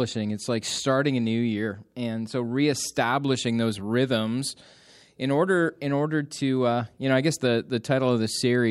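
Nothing in the speech stood out as a technical problem on listening.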